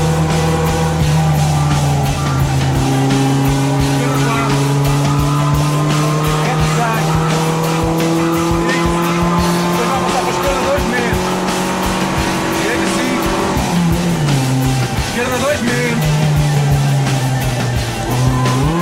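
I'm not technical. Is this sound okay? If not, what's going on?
Yes, the sound is okay. Nothing goes wrong in it at any point, so there is nothing here to fix.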